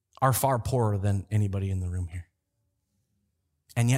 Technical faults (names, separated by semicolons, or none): none